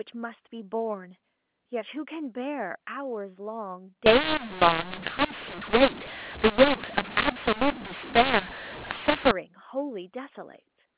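Speech over G.711 telephone coding, its band stopping at 4 kHz. From 4.06 to 9.31 s it turns harsh and gritty because mu-law and A-law are mixed up: audio encoded with A-law is being decoded as mu-law. Each 8-bit code lands on the wrong step of the logarithmic scale, so some levels swell, others shrink, and near-silent gaps fill with hiss. Clipping only flattens the loudest peaks, but this raises noise even in the pauses.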